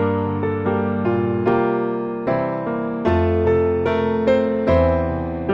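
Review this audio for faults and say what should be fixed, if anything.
Hard clipping occurs at 1.48–1.52 s, 3.08 s, 3.86 s and 4.28–4.89 s. Peaks exceed the stage's ceiling by up to about 3 dB and are sliced flat, generating high harmonics heard as brief crackle on the peaks. Lower the gain ahead of the converter or add a limiter so peaks stay below full scale.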